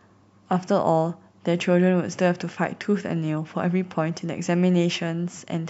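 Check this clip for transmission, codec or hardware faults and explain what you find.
Nothing to report: no faults found anywhere in the speech.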